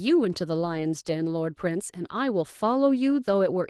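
Lost packets rebuilt from error correction, between 0.61 and 0.79 s: five separate packets went missing, and the decoder rebuilt about 100 ms of the speech from the low-bitrate backup copies that the following packets carried. Because of those copies there is no gap or dropout. The rebuilt stretch sounds rougher and noisier than the Opus speech around it, which is coded at 32 kbps with audio up to 12 kHz.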